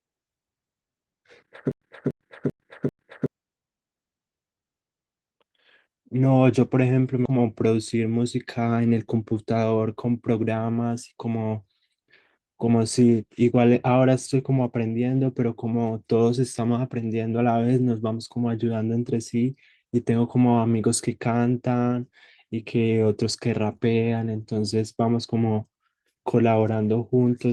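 From 1.72 to 3.26 s there's a stutter with silent gaps: a 290 ms burst of the speech plays four times, each followed by 100 ms of dead digital silence, so it ticks along at roughly a 390 ms rhythm. The likely cause is a stalled stream replaying its last fragment on each retry before running dry, and whatever should have played there is gone.

Then at 7.25 to 7.27 s the audio skips ahead. About 0.4 s of speech is simply missing, and the two sides are butted together with no fill. It sounds like an abrupt jump where later audio was already queued.

Right after, from 7.37 to 9.34 s, a jitter buffer speed-up kicks in. The receiver trims small pitch-period slices over and over, shedding around a fifth of a second to catch up. The speech runs about 9% fast at unchanged pitch and comes across rushed. The whole clip's top end stops around 12 kHz, which fits an Opus call path at about 32 kbps.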